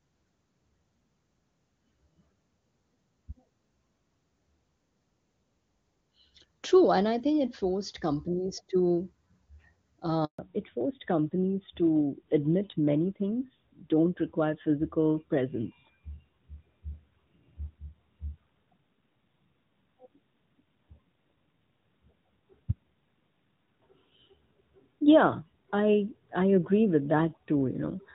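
At 10.25 s the call hits a handover gap: the phone switches networks and no speech frames get through for about 140 ms, until 10.39 s. The speech cuts off quickly and there's dead silence, so whatever was said in that stretch is simply gone.

Right after, from 10.39 s to the end, there's a fallback to narrowband. The call drops out of HD Voice, which up to then sounds clear, consistent with AMR-WB at a high rate like 23.85 kbit/s. It lands on a narrowband codec that fits AMR-NB at 12.2 kbit/s. Everything above 4 kHz disappears, and the speech turns duller and more muffled.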